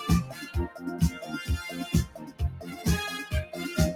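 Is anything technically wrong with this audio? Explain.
Yes. A speech-tuned noise suppressor was left running over the whole clip. It treats sustained sound as noise, so the level swings by roughly 10 dB and the audio pumps and thins.

The suppressor cut sound from 0.68 to 0.83 s, down about 10 dB, and again from 2.08 to 2.4 s, down about 12 dB. In both spots it mistook the sound for noise, so the sound audibly sinks there.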